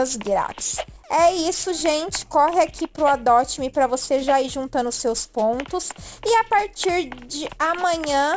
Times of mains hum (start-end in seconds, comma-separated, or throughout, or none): none